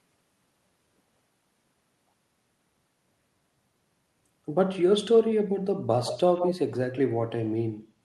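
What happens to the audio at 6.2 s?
Around 6.05 to 6.53 s there's an echo leak: a delayed copy of the speech, about 150 ms behind and roughly 10 dB quieter, likely from a loudspeaker echo canceller letting some through.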